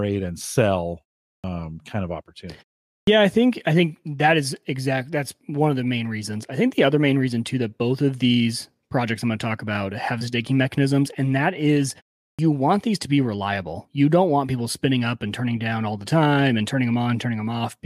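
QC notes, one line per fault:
1.38 to 1.44 s, 3.02 to 3.07 s, 12.33 to 12.39 s: clipped start after a pause, three times. After pauses of about 0.4 to 0.5 s, the output path is still waking, so roughly 55 ms of each onset is lost and speech resumes abruptly, missing its first sounds.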